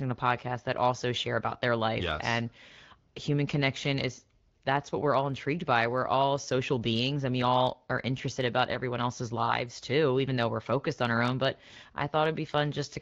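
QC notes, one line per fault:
No faults found; the speech carries the character of the AMR wideband (HD Voice) codec at 12.65 kbit/s, with the band up to 6.4 kHz modelled directly, 6.4 to 7 kHz filled with shaped noise, and only light coding traces audible.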